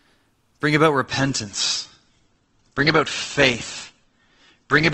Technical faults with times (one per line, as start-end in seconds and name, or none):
1.06-4.93 adaptive stream at a lower bitrate